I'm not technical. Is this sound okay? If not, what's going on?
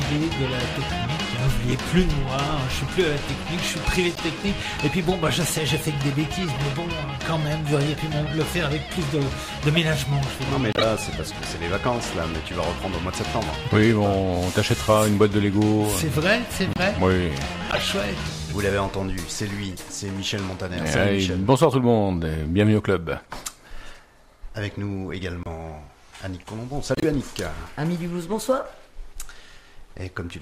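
No. Seven short chirps or bursts of noise break into the sound at 4.15–4.21, 9.74–9.77, 10.73–10.84, 16.73–16.79, 17.71–17.79, 25.43–25.47 and 26.95–27.04 s. The one near 10.7 s is the loudest. Each is a corrupt frame decoded: a few small chunks of the compressed audio got scrambled, and the player played them anyway. Unlike a dropout, where sound briefly vanishes, you hear brief wrong sound in its place.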